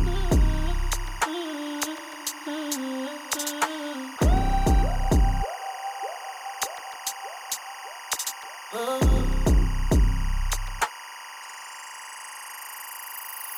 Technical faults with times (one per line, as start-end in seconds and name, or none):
0.00-13.58 timecode bleed